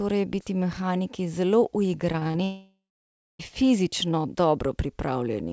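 From 2.12 to 2.36 s, the speech turns choppy and robotic. This is repeated packet loss. Four short holes fall close together, the longest about 27 ms. Each one is patched by stretching the sound just before it. About a third of that quarter-second is patched sound rather than real speech. Small pieces of the speech go missing.

At 2.44 s the sound breaks off until 3.41 s. The last sound is first carried on as a fading buzz. Roughly the final 0.6 s of the gap is near silence. Speech then resumes further on, and about a second of it never plays. The likely cause is a long network dropout, where no audio reached the receiver. Throughout, nothing is heard above 8 kHz, which fits a wideband call codec such as G.722.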